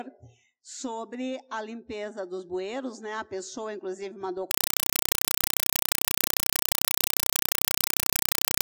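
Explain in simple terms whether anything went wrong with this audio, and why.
Compressed stream played as audio, from 4.51 s to the end: the sound gives way to loud, chattering static. This points to a Dolby Digital stream played as ordinary sound rather than decoded, with each 4 ms burst of data repeating 31.25 times per second.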